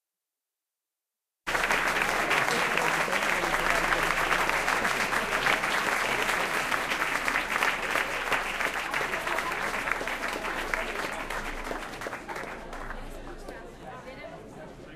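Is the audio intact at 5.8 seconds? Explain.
No. From 0.08 to 14.83 s the clip has periodic USB or driver dropouts: every 0.25 s a stalled bus or driver drops roughly a millisecond of audio as silence, giving regular ticks. The waveform shows tiny evenly spaced flat gaps, and the spectrogram shows thin vertical broadband lines.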